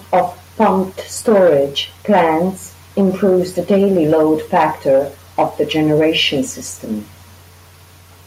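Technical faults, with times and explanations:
No technical faults, with times or explanations, are present.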